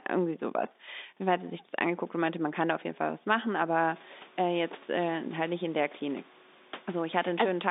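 Nothing faulty here: the speech sits in a telephone band of 200 Hz to 3.7 kHz, consistent with G.711 mu-law coding, and the room noise steps up by about 15 dB at around 4 s yet stays about 26 dB below the speech, which belongs to the room rather than the system.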